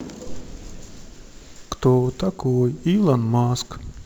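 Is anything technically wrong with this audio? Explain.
Yes. Sample clock jitter runs throughout the speech. The converter's clock wavers by roughly 5 microseconds, so each sample lands slightly early or late, and the error scales with how steeply the waveform moves. The result is a rough hiss about 35 dB below the signal that swells on loud, bright passages and disappears in pauses.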